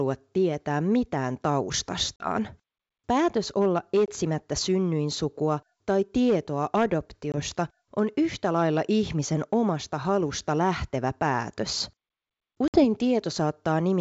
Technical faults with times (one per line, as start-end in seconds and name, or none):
2.16-2.29 packet loss on an ADPCM call
4.06-4.10 packet loss on an ADPCM call
7.32-7.35 packet loss on an ADPCM call
12.68-12.85 packet loss on an ADPCM call